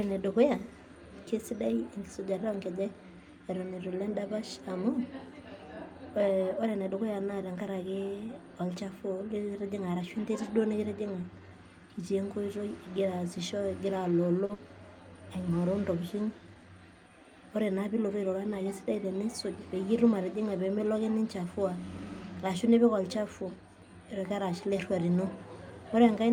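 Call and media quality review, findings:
Short stall from a late packet at 14.45 to 14.51 s: sound held about 40 ms with a faint buzz or dip, nothing lost. Jitter buffer ran dry waiting on a late packet, stretched the last frame, then resumed in place. Playout delay up about 40 ms afterwards.

Burst of packet loss right after, 14.53 to 14.68 s: roughly 50 ms of held, fading sound, then speech picks up later with about 60 ms gone. Several consecutive packets lost or too late; concealment carried the last sound, then gave up.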